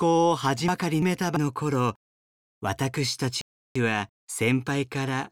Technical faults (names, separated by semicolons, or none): chunks out of order